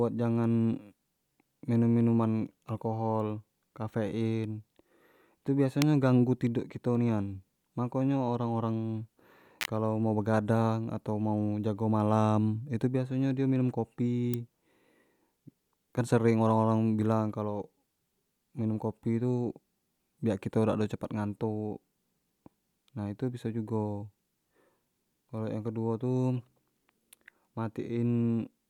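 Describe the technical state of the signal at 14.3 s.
An electrical switching spike at 14.34 s: a sharp snap peaking around -15 dBFS over the speech, likely from a nearby switch or discharge arcing into the audio line.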